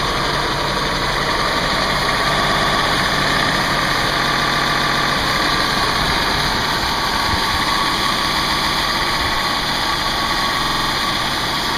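At 2.43 s a 116 ms block of sound plays three extra times, and at 4.29 s a 139 ms block repeats six times, then three times at 8.37 s. At 10.62 s a 46 ms block repeats six times. These are repeated frames: a run of compressed frames was decoded again, so identical audio recurs, and the clip grows by about 1.88 s in all. Unlike an echo or dropout, nothing decays or goes missing.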